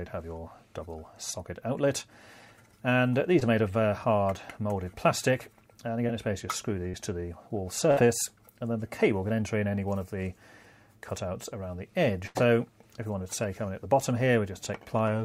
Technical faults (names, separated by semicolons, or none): short concealed packet loss; burst of packet loss